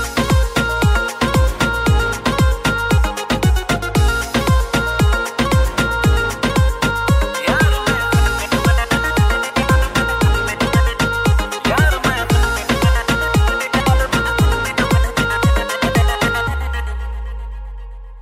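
No technical faults can be heard in this audio. Nothing in it calls for a time, a cause or a repair.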